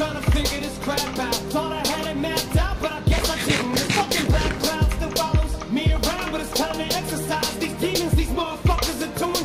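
At 3.53 to 3.56 s a single loud pop cuts through, a few decibels above the sound. A sudden voltage pulse, likely from a switch or static, caused it.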